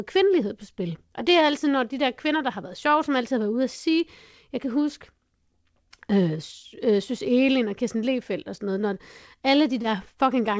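At 9.82 to 9.86 s there is a short concealed packet loss. About 20 ms of audio was missing, so the decoder extended the preceding sound, producing a brief smear.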